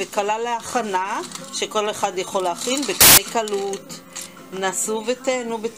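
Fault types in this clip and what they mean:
Samples built from the wrong bytes, 3.01 to 3.18 s: for about 0.17 s the reader assembles each sample from misaligned or swapped bytes, so the rapidly fluctuating low-order bits land in the most significant positions, producing a sudden burst of loud, harsh broadband noise.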